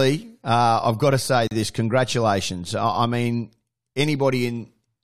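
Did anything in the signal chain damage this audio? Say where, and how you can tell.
Yes. A gap at a join of encoded pieces shows up right after "I've got to say", where the speech drops out from 1.47 to 1.51 s, a silence of about 38 ms. It comes from the codec stage: separately encoded segments were joined without trimming the encoder's start-up delay and last-frame padding. The speech then resumes exactly where it stopped. On a spectrogram this is a thin, empty vertical band with slightly smeared edges. On the waveform it is a short flat stretch between smeared, tapering edges.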